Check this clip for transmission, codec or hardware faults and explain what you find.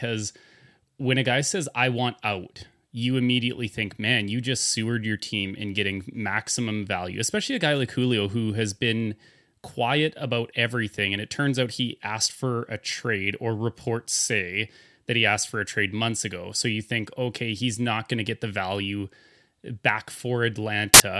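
One fault appears near the end of the speech. File tags played as audio, 20.94 to 21.0 s: embedded cover-picture data is decoded as samples, producing a hard-edged burst of very loud white noise.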